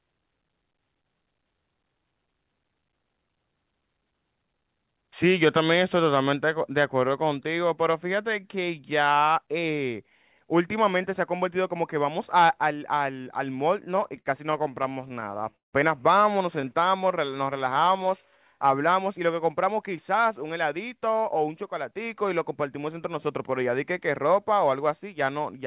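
From 13.78 to 15.75 s there are repeated stalls, a stutter. The audio keeps pausing, about two dozen times. Packets were arriving late, so the jitter buffer ran dry again and again. Each time, the receiver stretched the last sound to bridge the wait. The longest bridge lasts 165 ms and fades out. In all, 441 ms is filled in, about 22% of the span. Nothing is lost, but the speech drags and jerks.

Next comes a jitter buffer slow-down, from 16.55 to 17.98 s. The buffer needed a larger reserve. So the receiver repeated single pitch periods and slivers of pauses, over and over. This adds 137 ms. The speech runs at 91% speed. The pitch stays put. Sounds are drawn out, with a faint warble in places.

From 19.88 to 23.71 s there is a jitter buffer speed-up. Now the buffer held too much audio. The receiver trimmed tiny pieces, one or a few pitch periods each, many times in a row. Roughly a fifth of a second is removed. 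The speech runs at 106% speed, at the same pitch. It sounds slightly hurried.

Throughout, nothing is heard above 4 kHz, which fits a narrowband G.711 A-law call path at 64 kbps.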